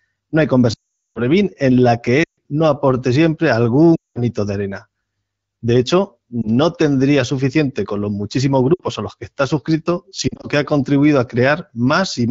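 Lost AMR speech frames occur on this wideband (HD Voice) speech link. Radio errors corrupted frames, and the decoder filled each gap by repeating the last good pitch and vocal tract settings at falling gain. The longest loss, about 420 ms from 0.73 to 1.20 s, drops the sound to near silence. Shorter runs at 2.23 to 2.39 s (140 ms) and 3.95 to 4.23 s (200 ms) fade similarly. A single dropped frame at 6.42 s gives a brief dip, and a 60 ms loss at 8.73 to 8.82 s drops to near silence. From 10.28 to 10.46 s scattered losses of up to 40 ms produce brief dips or warbles.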